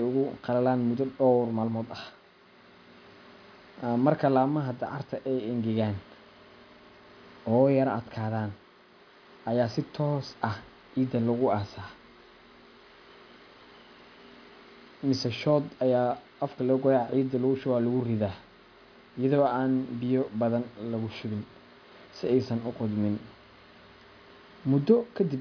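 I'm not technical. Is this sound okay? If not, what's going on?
Yes, it sounds fine.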